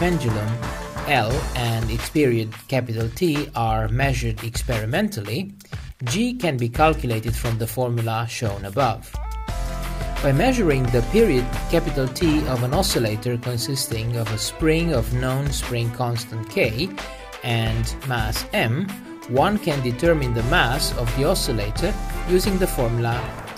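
No technical faults can be heard at any point in this recording.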